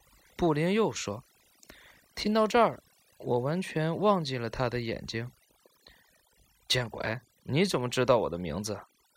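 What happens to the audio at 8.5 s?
At 8.5 s the speech carries the overdone noise removal present across the whole clip: a heavy-handed noise reducer cuts individual frequency bands whenever they sit near its noise estimate, taking quiet speech detail with them, so the background is near-silent with twinkling specks.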